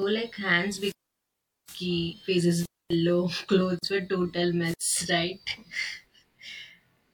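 It's a speech recording with three things going on. Throughout, there's channel delay causing comb filtering: one side runs roughly 20 ms behind the other, and once they're folded to mono the shared content cancels at evenly spaced frequencies starting down around 20 Hz, so the whole thing sounds rough or slightly doubled. Then there are three wireless microphone squelch dropouts, at 0.71–1.81 s, 2.54–2.94 s and 4.64–4.81 s. In each, hiss swells, the output goes nearly dead for about 790 ms, 270 ms and 96 ms respectively, and the voice comes back. That's the FM link fading far enough for the receiver's squelch to shut the audio off. Finally, at 3.79–3.83 s there's a gap at a join of encoded pieces, a silence of about 40 ms with its edges smeared by the codec, after which the sound picks up right where it stopped. It fits pieces 4 s long, each encoded separately with its start-up delay and end padding left in when they were stitched together.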